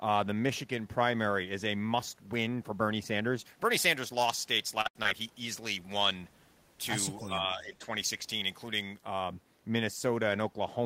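From 3.39 s to 9.02 s, pre-emphasis is left on. A treble boost applied before recording or transmission was never undone by the matching de-emphasis. Following a J.17-style curve, the top end sits about 11 dB higher at 10 kHz than at 1 kHz, so the speech sounds thin, bright and hissy on sibilants. On a spectrogram, the region above a few kHz looks brighter across that whole stretch. The waveform looks spikier, with less rounded low-frequency swing.

Inside that stretch, a short concealed packet loss runs from 4.81 s to 4.87 s. About 40 ms of audio never arrived, and the receiver bridged 36 ms of it by extending the preceding sound before blending back in. A second one, from 5.03 s to 5.07 s, patches 18 ms of a 20 ms hole. Each is heard as a brief smear or wobble. A spectrogram shows a short patch of copied or blurred texture with a soft seam at each end.

Between those two, a burst of packet loss runs from 4.87 s to 4.97 s. 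About 80 ms went missing in a run, and the concealer filled 78 ms of it by prolonging the last sound while fading it. The result is a held buzz or fading hiss, after which the speech picks up further on with that piece gone. On a spectrogram, harmonics freeze into flat horizontal lines or smooth noise that dims, then the normal pattern resumes abruptly.

At 7.19 s to 7.28 s, a faint echo leak appears: a delayed copy of the talker, about 297 ms late and roughly 20 dB down. It most likely comes from a loudspeaker on one side whose echo canceller let some pickup through. It sounds like a ghost of the voice. A spectrogram shows a weak, time-shifted repeat of earlier harmonic patterns.

Overlapping it, from 7.21 s to 7.88 s, speech is suppressed in double talk over about 0.7 s, with dips of around 10 dB at worst. The likely cause is the canceller failing to separate the talker from the loudspeaker echo while both sides were active, so it turned everything down. 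The voice ducks, dulls and breaks in pieces. The waveform envelope sags in uneven chunks, and the spectrogram loses energy, especially in the upper bands.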